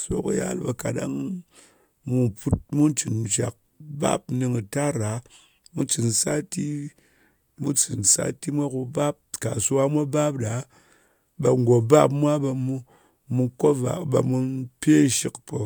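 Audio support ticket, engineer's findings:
Engineer's findings: no audio fault found on the ticket's speech clip.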